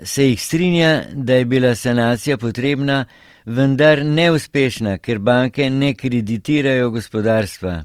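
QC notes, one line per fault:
Throughout: Opus compression, likely the cause of the grainy, rough texture spread over the whole speech clip, with voiced sounds turning noisy rather than clean. The damage is plainly audible, but the bandwidth stays fullband, which fits Opus in its music (CELT) mode at a low rate of about 24 kbps. Each band's energy is kept while its fine detail is filled with folded or noise content. On a spectrogram, harmonics look smeared and speckled, with few empty holes.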